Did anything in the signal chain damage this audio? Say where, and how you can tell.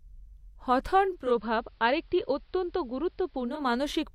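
Yes. At the radio receiver, digital radio blending to analogue runs from 0.99 to 3.77 s. Over about 421 ms the speech cross-fades to the AM feed. The level drops about 3 dB, and hiss appears roughly 40 dB down before it blends back.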